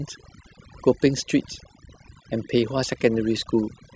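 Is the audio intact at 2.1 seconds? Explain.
No. At 2.1 seconds, as across the whole clip, the speech carries overdone noise removal: a noise reduction stage was driven far too hard, so any frequency band sitting close to its noise estimate gets pulled down sharply or switched off, and the softer parts of the voice are caught along with the noise. The gaps fall to an unnatural near-silence dotted with twinkling specks.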